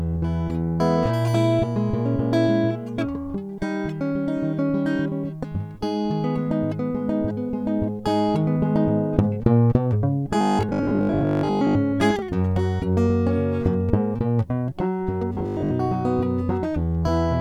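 Audio likely arrived too seldom from 10.41 to 11.77 s and from 15.35 to 15.77 s, so short stretches were repeated in its place, causing robotic sound from repeated short buffers. A metallic 50 Hz buzz, fitting 20 ms repeats, covers most of the first span and about half the second.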